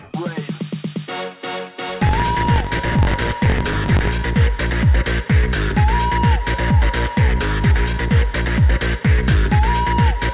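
From 1.90 to 4.11 s, a filter restarted on every block produces a 46.9 Hz buzz tracking the sound's level, which fits 1024-sample blocks, over audio band-limited at 4 kHz.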